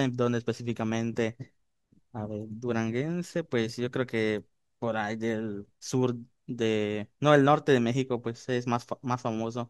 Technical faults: none

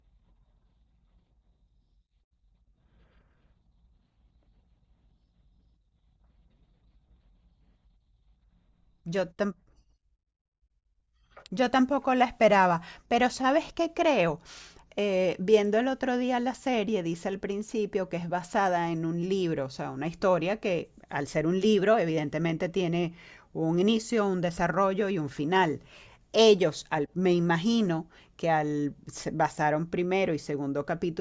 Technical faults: none

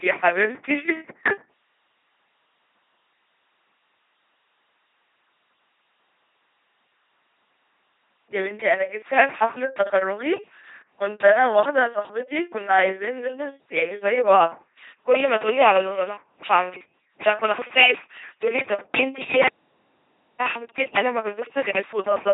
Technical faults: LPC-10 vocoder; audio dropout to silence

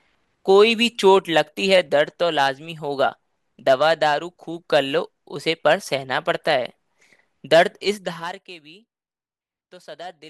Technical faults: zipper noise

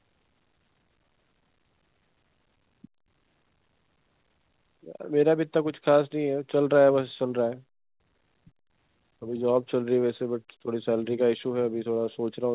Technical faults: none

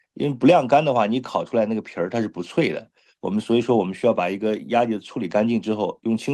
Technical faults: none

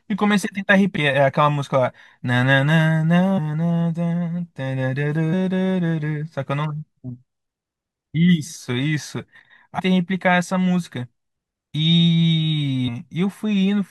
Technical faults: damaged data in a compressed stream

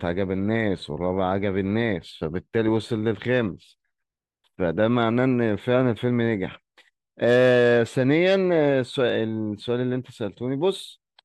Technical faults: none

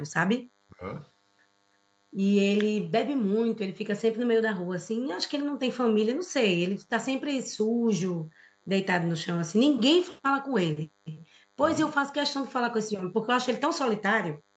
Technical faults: DECT cordless phone buzz; speech suppressed in double talk

